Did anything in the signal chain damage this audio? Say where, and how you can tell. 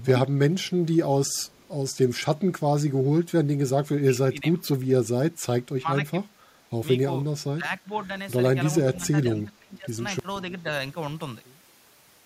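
Yes. At 1.31 to 1.68 s a very faint delayed copy of the speech sits under the direct signal, roughly 40 dB down and trailing it by 485 ms. This is echo leak, likely from call processing on the far end: a loudspeaker fed the microphone there, and the echo canceller left a small residue that was sent back. The long, fixed delay suggests a round trip through the call path, not room reflection.

The speech level also dips sharply at 4.11 to 4.64 s, 5.80 to 6.14 s, 7.56 to 7.66 s, 7.82 to 7.90 s and 8.96 to 9.92 s. The drops run roughly 10 to 20 dB, with the deepest and longest in the last stretch. This is speech suppressed in double talk, likely in call processing: with both sides talking, the echo canceller treated the near talker as echo and attenuated it. The dips are uneven, not a steady gain change.

From 10.19 s to the end, the speech cuts out abruptly and leaves only faint sound, roughly 30 dB below the signal. 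This is an audio dropout to a faint residue, likely in the transport or buffering stage: the wanted signal stopped arriving, but the path after the break stayed live and carried a low leak. The hard edge sets it apart from a natural pause or a fade.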